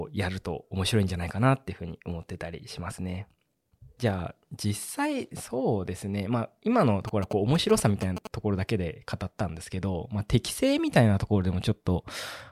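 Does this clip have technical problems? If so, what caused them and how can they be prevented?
Yes. GSM signalling bursts run from 7.08 to 8.27 s: a galloping dit-dit-dit of short 217 Hz buzzes, about 10 dB below the speech, from a nearby 2G phone rectified by the audio circuit. Keep phones away from the equipment.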